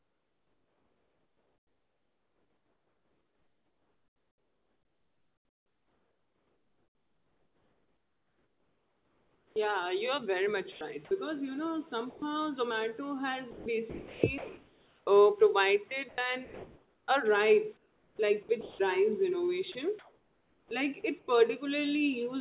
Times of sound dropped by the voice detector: 12.10-12.22

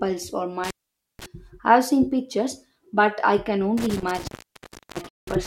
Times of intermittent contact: 0.64-1.26, 3.77-5.47

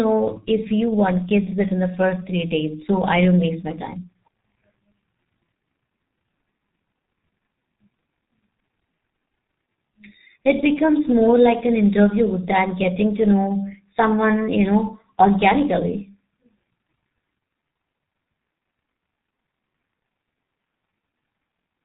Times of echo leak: none

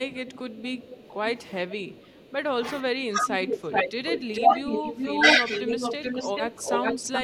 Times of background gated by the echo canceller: 3.61-3.70

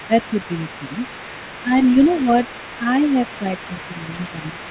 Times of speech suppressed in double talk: 0.08-0.33, 1.63-1.72, 2.22-2.27, 2.80-2.86, 3.41-4.70

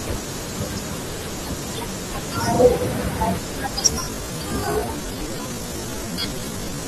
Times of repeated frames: 2.55-2.59

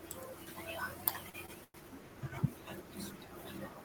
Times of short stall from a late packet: 1.29-1.76

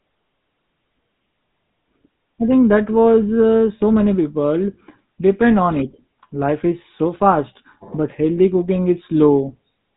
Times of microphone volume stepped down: none

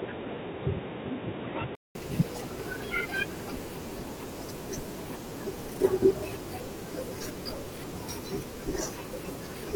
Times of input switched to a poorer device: 0.00-1.95

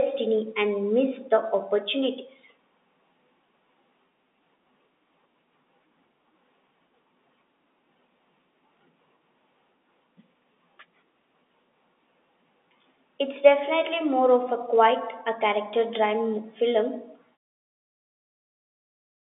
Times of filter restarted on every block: none

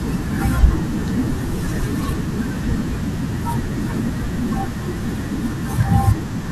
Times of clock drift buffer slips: 0.94-5.82

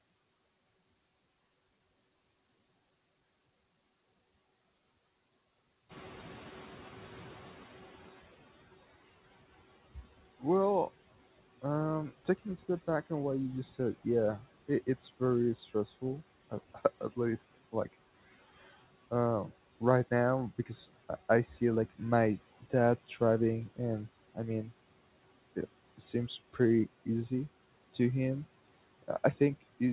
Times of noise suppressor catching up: 5.89-8.36

